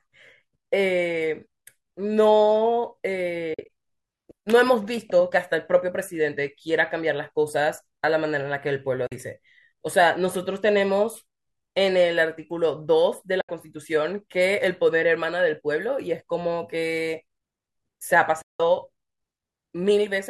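AAC frame loss with muting at 3.54–3.69 s, 9.07–9.12 s, 13.41–13.49 s and 18.42–18.60 s: dropped frames get zeroed, so the speech fades into soft gaps, broken up at 3.5 s and longest at 18.4 s.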